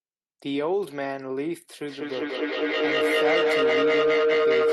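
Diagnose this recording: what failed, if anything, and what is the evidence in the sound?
Feedback howl from an acoustic device-to-device loop: from 1.85 s a tone near 500 Hz pulses and grows to about 6 dB above speech, where echo would fade.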